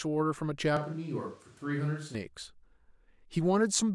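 From 0.77 to 2.15 s the close microphone's feed likely dropped out and a distant microphone took over. The speech turns suddenly roomy and hollow, with thinner bass, a level about 5 dB lower and more audible background noise, then snaps back to close sound.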